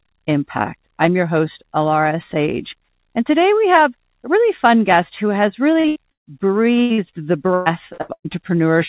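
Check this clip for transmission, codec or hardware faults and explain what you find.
Yes, there are packet-loss faults clustered in the last three seconds. The band stops at 4 kHz, which fits a narrowband G.711-style call codec.

Short concealed packet loss, at 5.80–5.87 s and 6.94–7.01 s: about 40 ms went missing each time. The receiver extended the preceding sound to cover the gap, leaving a brief smear or wobble.

Burst of packet loss, at 5.88–5.98 s, 6.11–6.30 s and 6.82–6.93 s: runs of 80 ms, 160 ms and 80 ms were lost. Each was patched by a fading continuation of the last sound, and the 160 ms gap drops to near-silence for about 150 ms before the audio resumes further on.

Repeated packet loss (robotic sound), from 7.54 to 8.36 s: four gaps arrive in close succession, the longest 119 ms, and concealment fills about half the stretch. The result is choppy sound with pieces missing.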